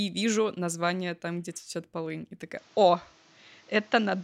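An input switched to a poorer device is the likely cause of the change at 2.57 s, which lasts to the end of the speech. From that moment nothing remains above 7.6 kHz, so the top of the sound turns dull and boxy, and a new background noise sits roughly 30 dB under the signal. The changeover is seamless, with no gap and no noticeable jump in level, only the sudden loss of brightness and the changed tone and noise floor.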